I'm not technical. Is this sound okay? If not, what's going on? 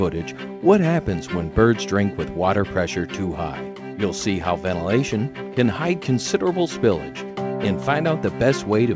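Yes, the sound is technically fine: it came through an ordinary internet call connection using the G.722 codec, which keeps nothing above about 8 kHz, so it has the slightly narrower tone typical of a call, and nothing goes wrong along the way.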